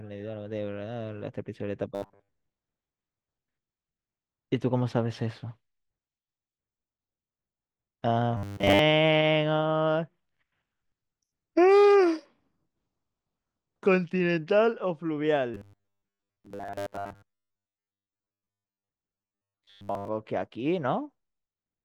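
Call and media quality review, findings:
Robotic sound from repeated short buffers, 1.95–2.31, 8.37–8.79, 15.54–18.88, 19.14–20.08 s: rigid 100 Hz buzz, likely starved buffer looping 10 ms chunks, most audio skipped.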